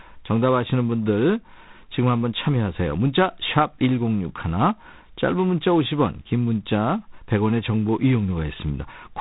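It's a speech clip, and the whole thing runs through G.726 ADPCM coding. Nothing gets past about 3.8 kHz, so it has that narrow telephone sound. There's also a harsh, rasping hiss riding on the speech that rises and falls with its level. That hiss comes from coding each sample as a few bits of difference from an adaptive prediction, and the amount of it fits the 24 kbit/s mode.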